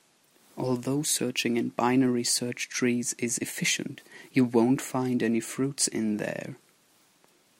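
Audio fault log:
No faults detected in this speech clip.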